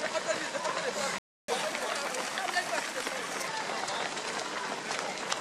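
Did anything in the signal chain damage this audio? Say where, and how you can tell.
Yes, at the playback stage. A playback stall cuts the audio to silence from 1.18 s to 1.48 s, a gap of about 300 ms, and the sound then resumes. The likely cause is the player's buffer running dry or its output thread being blocked.

Catch-up at higher speed follows at once. From 1.48 s to 3.47 s the audio runs at 1.15 times normal speed and sits about two semitones sharp, then drops back to normal. The player is resampling its backlog to recover the lost time.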